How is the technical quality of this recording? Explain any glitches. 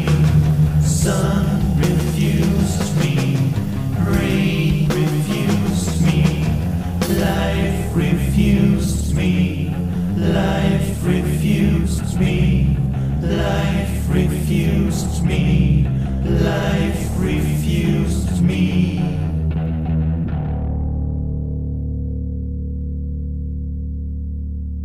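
The recording carries one clear fault from start to finish: a doubled audio track. A second, full-band copy of everything trails the original by roughly 150 ms, sitting a few decibels lower, around 5 dB down. This is most likely the same signal captured again through a slower path and mixed back in. What separates it from room echo or reverb is that there's only one repeat, at a fixed offset, with no decay tail and no change in tone, so every onset is smeared into a distinct, flat-sounding double.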